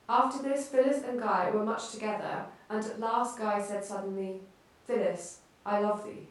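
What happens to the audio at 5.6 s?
At 5.6 s the speech carries on cleanly, with no dropout, click, distortion or other fault.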